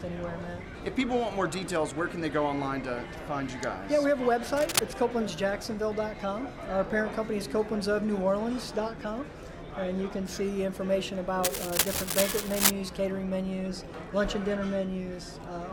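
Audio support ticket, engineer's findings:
Cable scratch noise, 4.54 to 4.80 s and 11.44 to 12.70 s. Dense, irregular crackle and rustle over the sound, roughly as loud as the programme itself. First burst short, second lasting about 1.3 s. Likely a worn cable, connector or pot being moved. Contact resistance jumping rapidly as it shifts, injecting uneven noise bursts into the signal path. Check and reseat connectors, then swap the cable.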